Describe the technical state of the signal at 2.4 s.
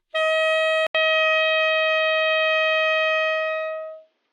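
At 2.4 s the sound lies within the input switched to a poorer device fault, from 0.87 s to the end. After an 80 ms gap, likely a lower-grade input took over: a spectrogram shows nothing above 6.5 kHz, with a faint new noise floor and similar waveform level.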